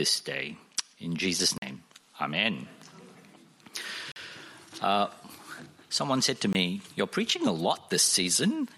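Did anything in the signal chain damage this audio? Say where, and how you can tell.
Yes. Three blocks of digital silence break the audio, at 1.58–1.62 s, 4.12–4.16 s and 6.53–6.55 s. The first two last about 43 ms and the third about 21 ms, which fits 2048- and 1024-sample blocks. That points to the driver or buffer stage: the output buffer wasn't filled in time, so zeros went out instead. Each gap cuts in and out with no fade. The waveform shows near-flat lines, and a spectrogram shows black vertical gaps.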